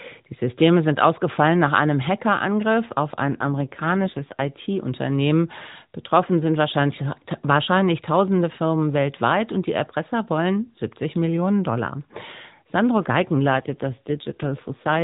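From 3.27 to 4.59 s, and again from 13.52 s to the end, there's an AMR rate drop. The speech turns rougher and more buzzy-synthetic with no gap and no change in bandwidth, which fits the mobile codec stepping down from 12.2 to 5.9 kbps to spend bits on error protection.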